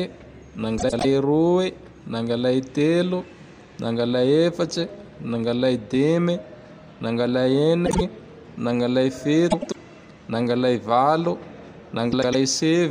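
Garbled flutters come at 0.78 to 1.05 s, 7.86 to 8.01 s, 9.50 to 9.76 s and 12.12 to 12.35 s: frames out of order, with adjacent blocks of 104.5 ms (52.2 ms in the second) swapped, so the halves play in exchanged order and no time is lost.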